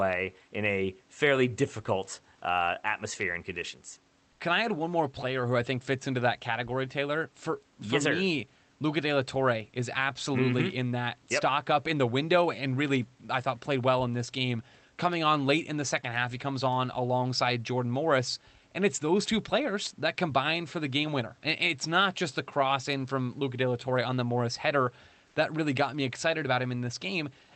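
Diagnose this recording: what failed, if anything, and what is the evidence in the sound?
Discontinuous transmission in the codec, likely Opus DTX, briefly stopped sending, and the receiver substituted comfort noise in place of the background. At 4.31–4.39 s and 25.27–25.35 s, 80 ms of room noise turns into featureless synthetic hiss, about 2 dB quieter, then about 1 dB louder.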